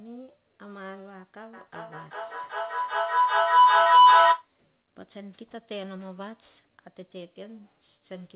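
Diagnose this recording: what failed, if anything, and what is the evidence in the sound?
A feedback howl swells from 1.53 s to 4.5 s: a tone near 1 kHz peaks about 21 dB above the speech, with repeats roughly every 400 ms. Stage: call processing. A second device in the room feeds the call back into the microphone, gaining level each round trip.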